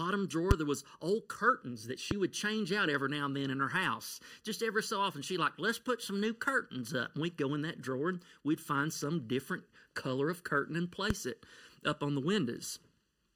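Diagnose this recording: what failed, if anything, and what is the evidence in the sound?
In the mono fold-down, one channel arrives under a millisecond late. This channel delay causes comb filtering, with notches from around 700 Hz, leaving the speech hollow and phasey throughout.

Loud pops at 0.51, 2.11 and 11.10 s, each roughly 20 dB above the speech, likely come from analogue switching transients, with the speech continuing underneath.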